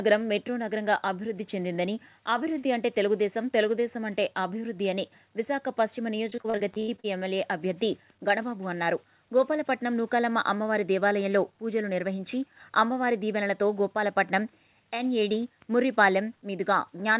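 Between 6.3 and 7.06 s the audio turns choppy, the sign of repeated packet loss (robotic sound). Holes up to 80 ms long follow one another, each patched by stretching the previous sound, so about 37% of the stretch is filler. A single lost packet gives one isolated blip, but here the concealment repeats in a chain. The call path's band limit, with nothing above 4 kHz, fits G.711 A-law narrowband coding.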